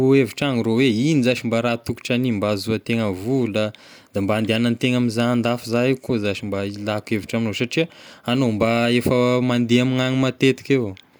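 No technical faults can be heard at any point in this speech recording. Nothing in the audio points to a problem with how it was captured or passed along.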